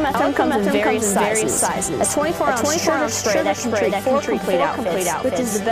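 From start to end there's a doubled audio track: a second copy at about the same level trails half a second behind, likely from a duplicated capture path.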